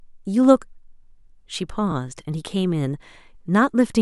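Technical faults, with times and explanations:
1.91–1.93 s, repeated frames: a brief stutter as 23 ms of speech plays a second time, which fits one compressed frame being sent twice, lengthening the audio by 23 ms.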